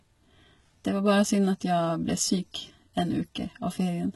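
Throughout the speech, the treble sounds rebuilt rather than original, with heavy codec damage and nothing above 11.8 kHz. The likely cause is HE-AAC compression at a rate fitting about 16 kbps, which copies lower bands upward, so upper harmonics misalign.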